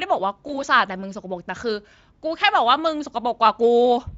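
A short run of VoIP packet loss concealed by the speech codec hits this speech clip at 0.47 s. About 20 ms of data went missing, consistent with a single lost frame. The decoder filled the gap by extending its last pitch and filter shape at falling gain. The sound smears into a brief buzzy, coloured stretch, and the speech stays thin and distorted until about 0.64 s while the decoder recovers. The Speex coding itself adds only light damage.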